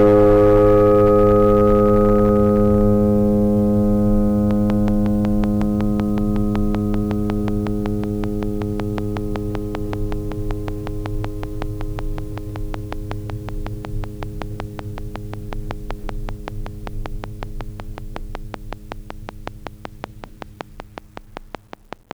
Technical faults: hard clipping; train of clicks

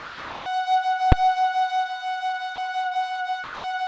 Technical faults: sound dropped by the voice detector; invalid numbers at full scale

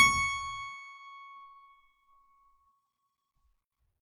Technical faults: none

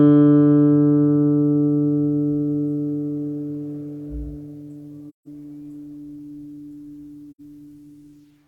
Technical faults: AAC frame loss with muting

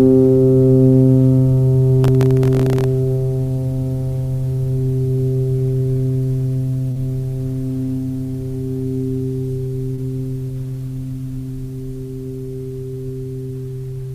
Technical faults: processor overload crackle; short concealed packet loss

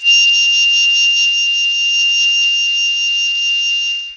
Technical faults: Bluetooth SBC compression

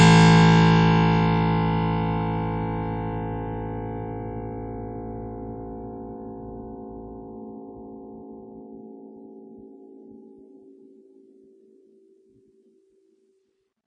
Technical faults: WMA compression

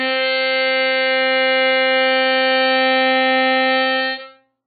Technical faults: MP3 compression

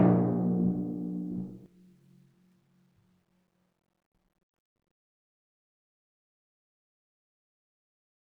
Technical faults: doubled audio track

